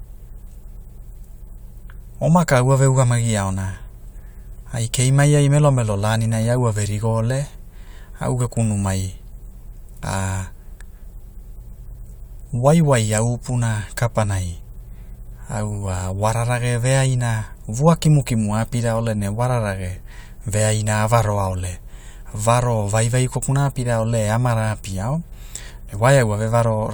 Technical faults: none

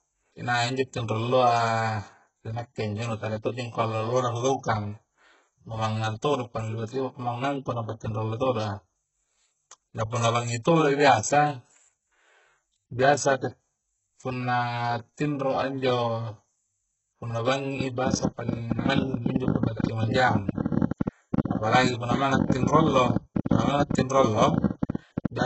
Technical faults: HE-AAC compression; train of clicks

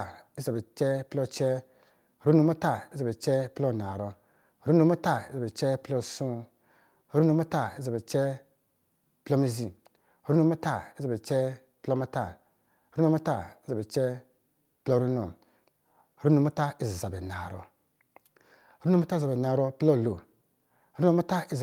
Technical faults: none

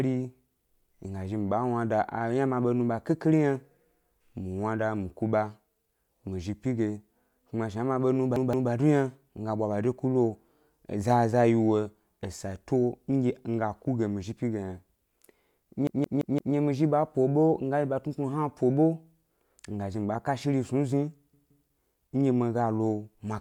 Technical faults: repeated buffer

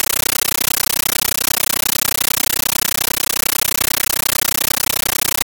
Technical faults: compressed stream played as audio

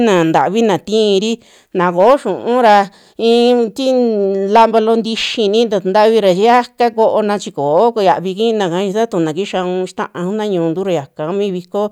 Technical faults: hard clipping

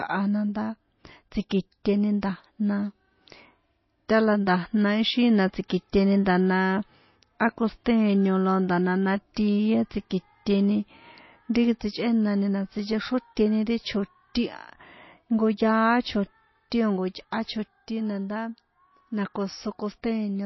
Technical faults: MP3 compression; pre-echo

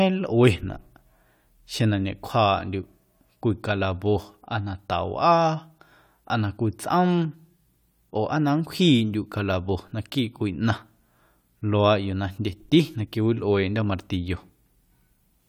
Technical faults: clock drift buffer slips

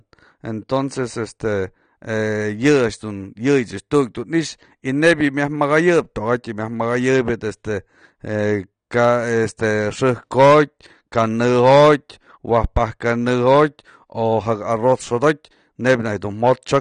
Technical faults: AAC compression

